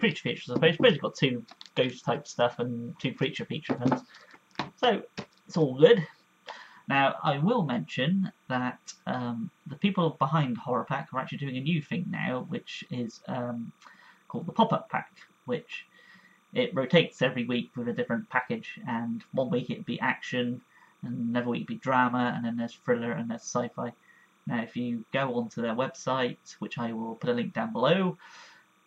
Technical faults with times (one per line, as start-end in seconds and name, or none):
0.00-28.87 timecode bleed